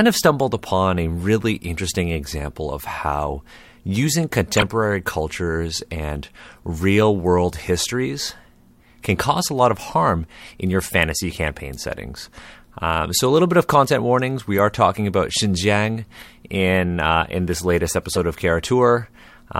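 Around 4.53 to 4.63 s there's a corrupt frame decoded, the worst of the lot. Flipped bits in the compressed stream got played anyway, so misread gains and codes dump energy where it doesn't belong, giving a loud squeaky burst peaking around -5 dBFS that points to a handful of consecutive bad frames. Smaller blips follow at 11.47 to 11.49 s and at 14.58 s, then a middling chirp at 18.11 to 18.17 s, spanning a few frames.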